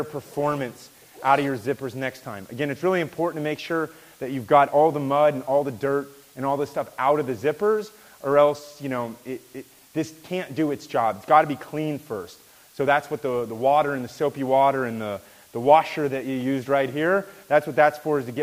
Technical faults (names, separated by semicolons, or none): low bit depth with dither